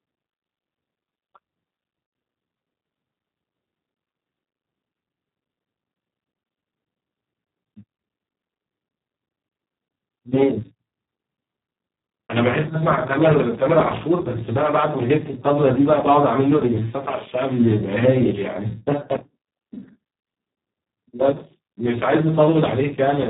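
Speech coded throughout with the Speex codec at a setting that fits roughly 4 kbps leaves the voice hoarse, noisy and robotic, with nothing above 3.8 kHz.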